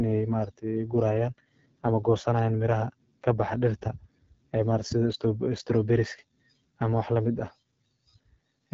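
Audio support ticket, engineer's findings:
AMR wideband (HD Voice) codec damage across the whole speech clip. Rough, raspy texture, clearly audible; no content above 7.6 kHz. Probable component: AMR-WB encoder at one of its lowest modes, roughness consistent with about 8.85 kbit/s. Mechanism: pulse-excited vocal tract model coding up to 6.4 kHz, with too few bits for the excitation, plus synthetic noise filling the band above.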